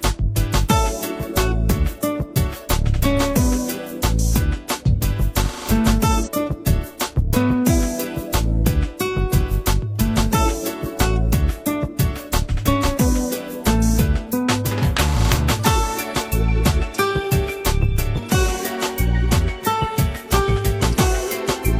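At 6.23 to 6.29 s the sound jumps abruptly forward with a brief blip, the mark of a stream segment skipped: likely one chunk failed to load and playback resumed at the next. Unlike a dropout, no silent gap follows. The material simply continues from further ahead.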